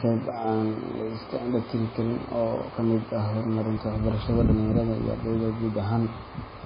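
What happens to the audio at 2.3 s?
At 2.3 s the speech is still carrying the heavy MP3 compression damage that runs through the whole clip, likely from an encoder starved of bits, which points to a very low rate of around 16 kbps. Short of bits, it cuts everything above 5 kHz and zeroes weaker frequency lines that flicker in and out between frames. The result is dull, band-limited speech with a watery, swirling texture, metallic chirps on s sounds, and smeared consonant attacks.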